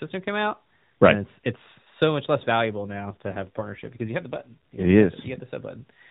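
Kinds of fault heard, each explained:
AMR rate drop: the link pushed the AMR-NB codec to a lower rate, trading speech bits for error protection. From 2.84 to 4.93 s the speech grows rougher and more synthetic, with no gap or band change, which fits a fall from 12.2 to 5.9 kbps.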